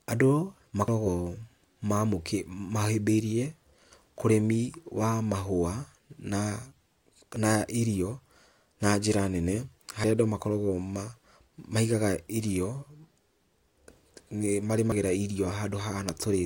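At 0.88, 7.36 and 14.92 s the speech jumps ahead, likely a dropped buffer (overrun). Roughly 70, 40 and 40 ms vanish. The second lands just before "na irio".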